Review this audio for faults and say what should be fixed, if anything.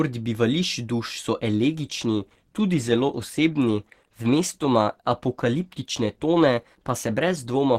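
From 1.57 s, just after "duš so", to the end, the speech abruptly changes in quality, with codec artefacts rising and no gap. This is an adaptive stream at a lower bitrate, consistent with a switch from Opus 64 to 16 kbit/s. To prevent it, provide enough bandwidth or buffering that the stream never steps down to the lower tier.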